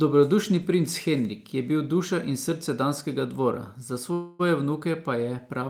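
Right near the end, from about 4.13 to 4.41 s, the speech hits a call audio freeze. For roughly 260 ms the last bit of sound gets stretched into a fading buzz, with no real silence. The likely cause is packets stalling in transit so the jitter buffer ran dry and the receiver padded the hole. Once they arrive, the speech picks up where it stopped, nothing skipped, just running about 260 ms later than before.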